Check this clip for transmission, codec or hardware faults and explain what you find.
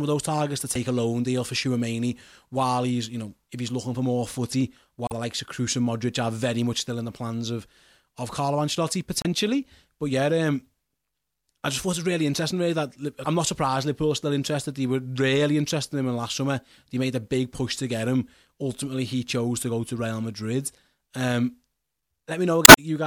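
Five short glitches of damaged data in a compressed stream break up the speech, at 0.72–0.77 s, 5.06–5.12 s, 9.21–9.26 s, 13.21–13.26 s and 22.64–22.78 s. At each one, corrupted bytes cause the decoder to misread frames and lose sync while it searches for the next header. The result is a brief chirp, squawk, click or short hole in the speech.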